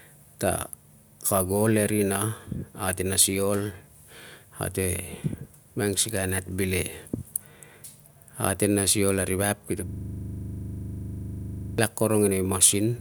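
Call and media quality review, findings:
System hang loop, 9.89–11.78 s: one 40 ms fragment repeats exactly, a 25 Hz buzzing stutter. Likely driver/host froze while hardware kept cycling its ring buffer. Spectrogram: vertical stripes every 40 ms; waveform: identical repeated blocks.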